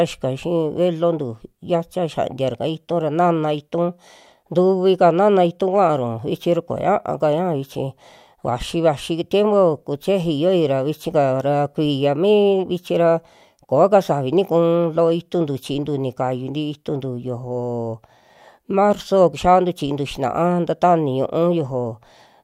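Listening closely to the speech recording, nothing stood out as a technical problem at any point.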